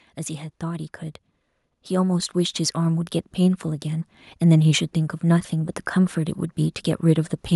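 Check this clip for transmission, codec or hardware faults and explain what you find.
One fault appears, automatic gain rising: from 1.88 to 4.19 s the speech and background swell together by about 8 dB, as automatic gain control lifts its level after judging the input too quiet.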